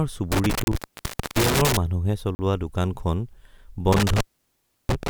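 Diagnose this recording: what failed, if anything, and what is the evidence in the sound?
Intermittent contact in the analogue wiring: a loose cable or plug opens twice, once within 0.32 to 1.77 s for about 609 ms and again from 3.92 s to the end at 5.10 s for about 687 ms. The speech drops to faint hiss while the line is open, with crackle at each break and remake.

Block of digital silence at the driver or buffer stage: the speech cuts to silence for 30 ms at 0.64 s and 40 ms at 2.35 s, with no fade. Each abrupt edge frames a short hole. This fits an output buffer that was not filled in time.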